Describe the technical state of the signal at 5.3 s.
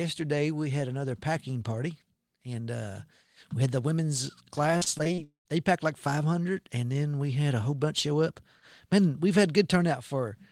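At 5.3 s the signal is inside a long network dropout running from 5.24 to 5.47 s. The speech stops abruptly and is replaced by a buzzy continuation of the last sound, lasting about 216 ms and fading away, with roughly 100 ms of near-silence at the tail. This is likely a gap in arriving packets that the receiver papered over before giving up. About 220 ms of the original speech is gone, and the audio resumes after it without that material.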